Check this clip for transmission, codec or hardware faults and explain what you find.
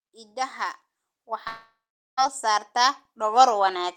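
Two faults stand out: a gain control that keeps raising the level, and a gap where the signal breaks off.

Automatic gain rising, from 0.21 s to the end: the automatic gain control judged the input too quiet and kept turning its gain up. Speech and background noise swell together steadily over the whole remaining stretch rather than in a single jump.

Long network dropout, 1.47 to 2.19 s: the sound stretches into a fading buzz or hiss, then about 0.43 s of silence, and speech returns with roughly 0.70 s gone. This is likely a network dropout, with the receiver stretching the last audio it had to cover the missing stretch before giving up.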